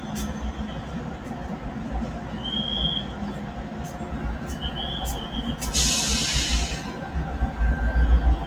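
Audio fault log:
Throughout, noise suppressor applied to music or sounds: a speech-tuned suppressor mistakes steady content and ambience for noise, pushing sustained parts and tails down by around 10 dB while attacks pass. On a spectrogram, sustains fade and gaps darken; the waveform envelope pumps.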